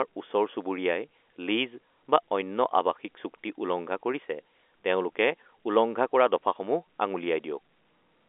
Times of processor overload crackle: none

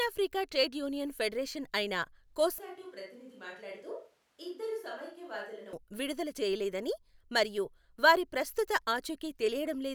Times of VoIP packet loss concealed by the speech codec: none

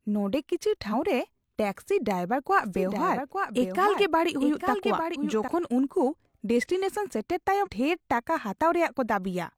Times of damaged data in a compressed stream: 0.89-0.95, 5.11-5.17, 7.62-7.68

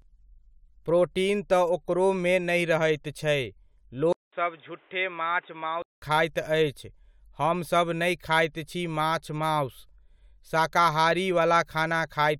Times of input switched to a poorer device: 4.13-6.02

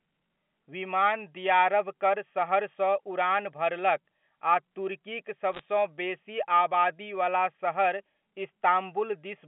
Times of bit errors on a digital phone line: 5.53-5.63

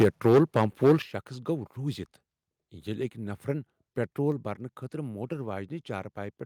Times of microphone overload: 0.00-0.93

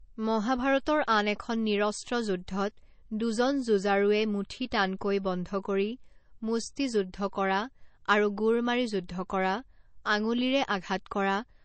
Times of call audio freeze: none

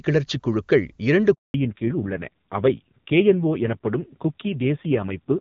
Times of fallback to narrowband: 1.54-5.41

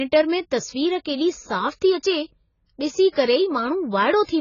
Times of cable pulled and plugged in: none

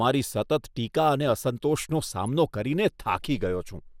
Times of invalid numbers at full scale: none

